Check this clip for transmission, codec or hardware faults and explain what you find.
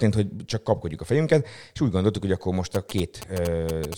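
One fault is present, GSM signalling bursts. From 2.75 to 3.94 s, after "gondoltuk hogy akkor most", a nearby 2G phone's radio bursts are rectified by the audio circuitry, adding galloping ticks and 217 Hz buzzes roughly 10 dB below the speech.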